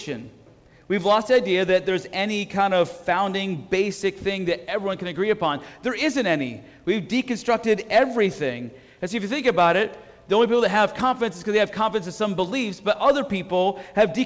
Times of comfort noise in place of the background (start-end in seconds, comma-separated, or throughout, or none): none